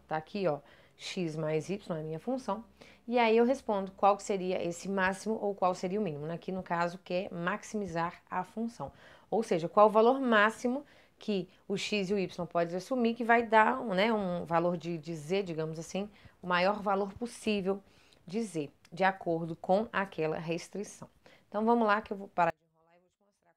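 From 22.50 s to the end at 23.57 s, the sound collapses by about 35 dB to a faint residue, likely one channel inverted cancelling against the other in mono. The waveform shrinks abruptly to a near-flat trace, and the spectrogram empties.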